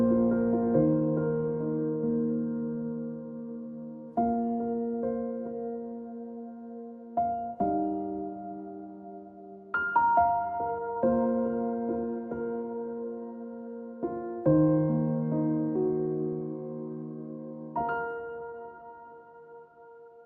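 No audible faults anywhere in the recording.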